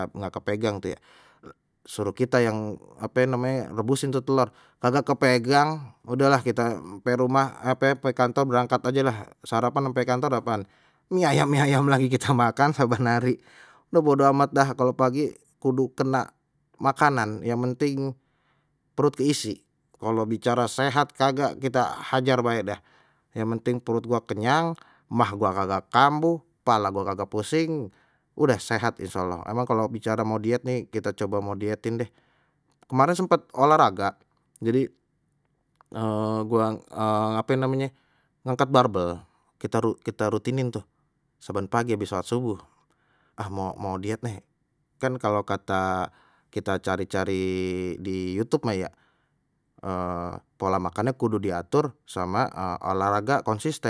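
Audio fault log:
Nothing stood out on listening to the speech in this recording.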